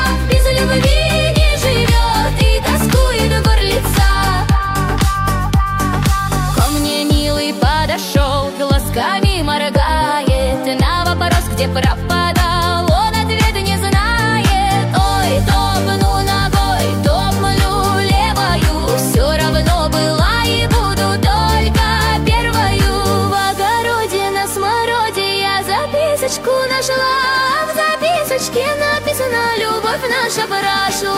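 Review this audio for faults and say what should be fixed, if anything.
From 8.03 to 8.78 s the audio slows by 5.5% and drops about 99 cents, nearly a full semitone, then snaps back to normal speed and pitch. This is likely a drift correction step, where clock-matching software changed the playback rate abruptly to rebalance its buffer. To prevent it, use continuous fine-grained resampling for drift compensation or lock both devices to a shared clock.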